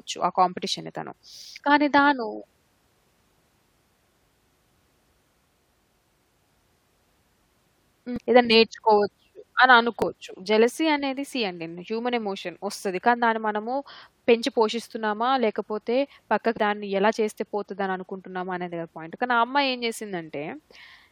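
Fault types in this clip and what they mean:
Damaged data in a compressed stream: Some bytes in the coded speech stream are corrupted. The decoder misreads those frames and loses sync. This is heard as very short chirps or blips at 8.16–8.18 s, 10.02 s and 16.57 s.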